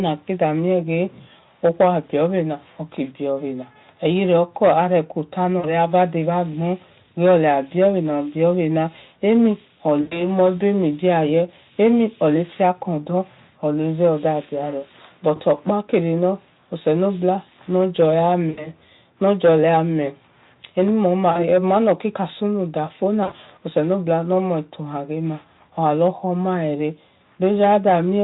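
Short gaps where the speech smears into a buzzy tone or coloured noise that fades occur at 5.59, 10.01, 15.35, 18.49, 21.31 and 23.23 s, each losing 40 to 100 ms. This is VoIP packet loss concealed by the speech codec: with packets missing, the Speex decoder, whose own coding damage is none or faint, stretched its last pitch and filter while lowering the gain.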